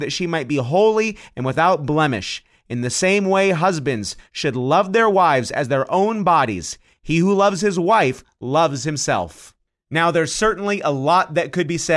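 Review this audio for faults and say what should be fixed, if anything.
Nothing to fix: no faults detected anywhere in the speech recording.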